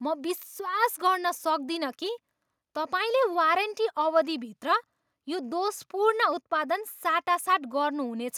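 No technical faults can be heard anywhere in the speech recording.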